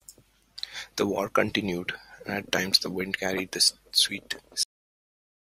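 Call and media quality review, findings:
Speech stops abruptly mid-sound at 4.63 s, straight into digital silence, no decay. Cut-off end: final buffers never written or played out, last 0.86 s lost.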